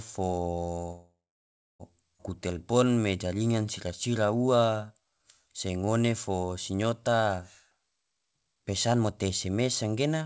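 From 0.92 to 1.82 s a call audio freeze, likely from held-up packets, stretches the last sound into a fading buzz. The waveform shows about 650 ms of near silence before the speech resumes.

At 2.18 to 2.22 s a skip ahead drops roughly half a second of speech. The two sides of the jump are joined almost directly, leaving an abrupt splice in the waveform.

From 2.53 to 7.17 s a jitter buffer slow-down repeats pitch periods, adding 500 ms and playing the speech at 89% speed with the same pitch. Harmonics look smeared and elongated in time.

From 7.71 to 10.22 s a jitter buffer speed-up trims pitch periods, removing about 0.7 s. The speech runs at 127% speed and sounds hurried. On the spectrogram the syllables look compressed, all beneath the G.722 band edge, which leaves nothing above 8 kHz.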